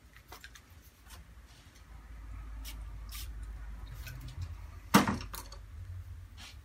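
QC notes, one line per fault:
0.43–6.63 s: word clock ticks, about ten sharp clicks of uneven strength recurring roughly every 0.7 s. The receiving device runs on its own clock, off by around 30 ppm, so each slip drops or repeats one sample and misreads its neighbours.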